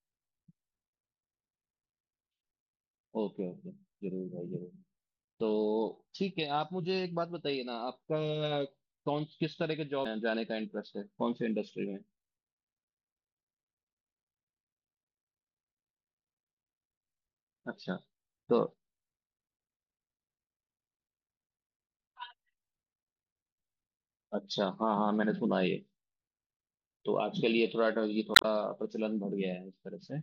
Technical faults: MP3 compression; damaged data in a compressed stream

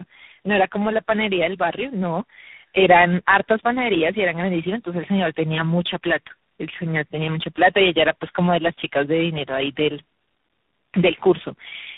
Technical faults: tandem speech coding

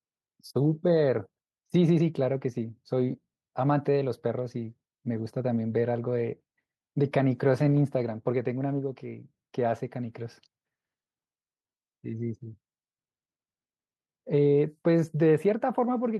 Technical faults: none

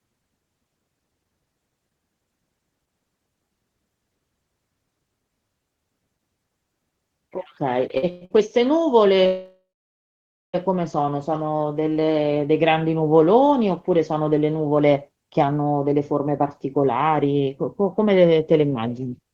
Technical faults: short stall from a late packet; call audio freeze; jitter buffer slow-down; jitter buffer speed-up

